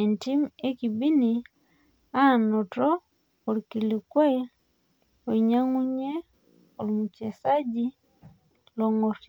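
No technical faults are audible.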